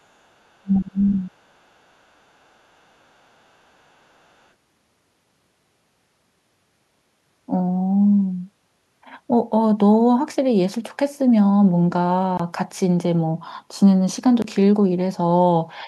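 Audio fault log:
0.6–1.21 s, speech suppressed in double talk: With both sides talking at once, the echo canceller likely lost track of which energy was the near talker and which was loudspeaker echo, and clamped down on the whole signal. The talker's level sinks by roughly 30 dB at its deepest, and the dips add up to around half a second across this span, so the speech thins and breaks into fragments instead of running continuously.
1.03–1.31 s, other side's voice leaking through: Overlapping that dip, the canceller's echo estimate likely falls short, so part of the far end's loudspeaker playback slips past into the microphone path. It sits low, about 25 dB under the talker, and comes through as a faint second voice just behind the main speech as the suppression lets go.
12.37–12.40 s and 14.42–14.44 s, block of digital silence: Each time, about 21 ms of output is replaced by silence, a length that fits a 1024-sample buffer left unfilled. 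Because the signal drops straight to nothing and jumps straight back with no ramp, each event is heard as a short, hard dropout in the sound.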